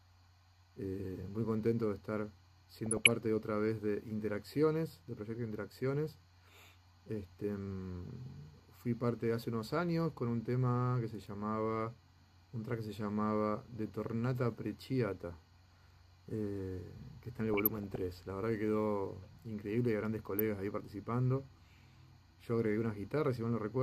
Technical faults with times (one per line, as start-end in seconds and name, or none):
2.86-3.10 DAB burbling
8.07-8.10 DAB burbling
17.54-17.96 DAB burbling
20.37-20.40 DAB burbling